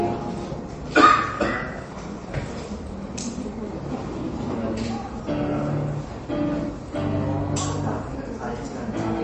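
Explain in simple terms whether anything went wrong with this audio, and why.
Yes, the whole clip has a dull, watery sound with nothing above about 8.3 kHz, most likely from heavy MP3 compression squeezing the sound into too few bits.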